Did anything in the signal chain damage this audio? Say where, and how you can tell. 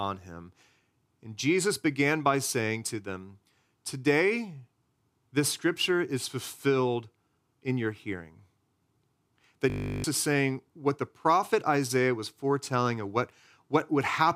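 Yes: a system hang loop at the driver/buffer stage, 9.7–10.04 s, before "is saying what the". A 20 ms buffer repeats as a 50 Hz buzz while the host stalled.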